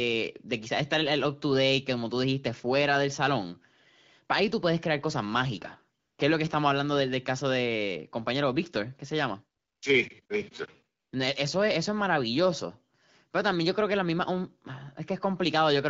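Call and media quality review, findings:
AMR comfort noise: background drops to a smooth, steady hiss in brief pauses at 5.99–6.17 s, 9.59–9.81 s, 10.25–10.29 s and 10.99–11.11 s, 40 to 220 ms each. Sender's silence detection stops speech frames; receiver synthesizes noise from coarse level and spectrum parameters. Wideband speech sounds clear, consistent with a 12.65 kbit/s AMR-WB link.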